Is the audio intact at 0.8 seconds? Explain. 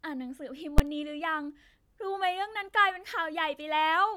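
No. At 0.78 s the speech is interrupted by invalid numbers at full scale. A calculation in the processing chain produced infinite or undefined values, which were clamped to the largest positive or negative sample value for one block of about 10.7 ms, which fits a 512-sample processing block. Because the block is so brief, the start and end edges merge and the event is heard as a single very loud bang.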